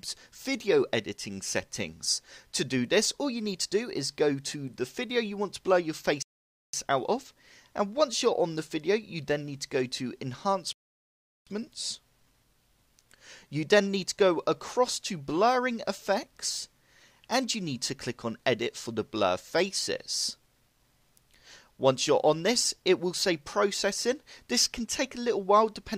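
Two rebuffering stalls interrupt the audio, at 6.23 to 6.73 s and 10.73 to 11.47 s, where the player ran dry and waited for data, adding about 0.51 s and 0.74 s. Each shows as a flat waveform and blank spectrogram gap, then playback resumes exactly where it stopped.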